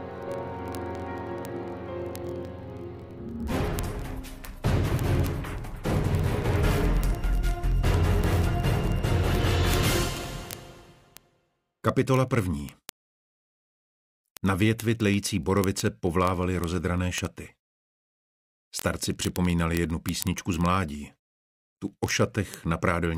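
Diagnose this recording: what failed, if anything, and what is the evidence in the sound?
The receiving device on the digital link was not locked to the sender's word clock, so the two clocks drift past each other steadily. The mismatch is roughly a thousand parts per million. Each slip misreads a few samples and drops or repeats a single sample, producing word clock ticks. These sharp ticks run at roughly 50 per second, about one every 20 ms, from 0.11 s to 23.17 s. That is around a thousand clicks across the recording.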